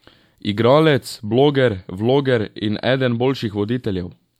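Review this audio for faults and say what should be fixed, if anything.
No faults found; nothing needs fixing.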